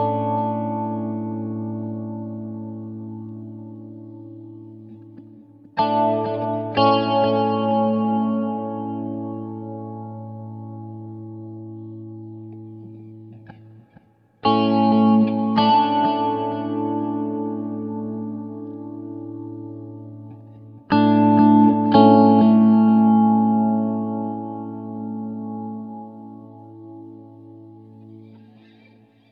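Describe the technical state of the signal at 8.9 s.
At 8.9 s the signal is intact, with no audible dropout, distortion or other technical fault at that moment.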